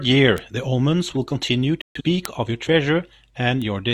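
Speech, with two kinds of fault. Bit error spikes at 0.38 s, 2.25 s and 3.62 s are single sharp, broadband ticks unrelated to the sound, where one flipped bit briefly threw a sample's value off by a power of two. A corrupt frame muted from 1.81 s to 2.02 s is an abrupt 0.20 s hole, consistent with a few damaged compressed frames rejected by the decoder and replaced with silence.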